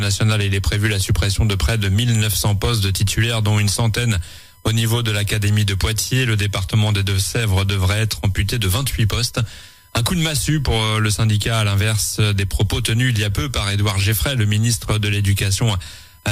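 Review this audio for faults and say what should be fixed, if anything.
USB whine runs throughout. It sits on multiples of 1 kHz, strongest at 12 kHz, roughly 35 dB below the sound. Millisecond USB frames leak in through power or ground. To prevent it, power the interface separately, or use an isolated USB hub or a ground-loop isolator.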